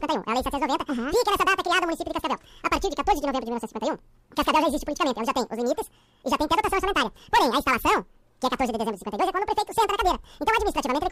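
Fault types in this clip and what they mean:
Audio read two samples at a time (double speed): each pair of samples is taken as one frame, so the sound plays twice as fast and an octave (12 semitones) higher. A spectrogram shows content shifted up; the waveform looks squeezed to half length.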